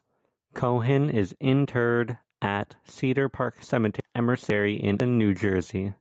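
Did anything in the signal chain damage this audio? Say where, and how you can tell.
Yes. Gain pumping runs through the whole speech clip, at the input stage before the call processing. The gain swings by about 5 dB, pulled down each time the speech gets loud. That points to the likely cause: input gain set too high for the microphone, with a fast limiter or compressor clamping down on every peak. The result is squashed dynamics, with loud and quiet passages pulled unnaturally close in level.

Chunks out of order occur between 4.0 and 5.0 s, at the driver or buffer stage. The audio in that second sounds jumbled. The pattern fits 500 ms blocks, one of which was written or delivered one block late and played after the block that should have followed it. Nothing is missing, but the two halves are swapped, leaving three abrupt splices inside that window. The call path's 8 kHz upper limit is not the cause.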